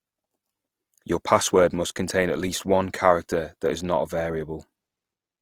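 From start to finish the speech carries plainly audible Opus compression artefacts, likely from encoding in the codec's music-oriented CELT mode at a low rate consistent with about 24 kbps. Short of bits, the encoder keeps each band's energy but fills band detail with folded copies of lower bands or noise, so voiced sounds turn rough, grainy and hissy. A spectrogram shows full bandwidth with few empty holes, but smeared, noise-textured upper bands instead of clean harmonics.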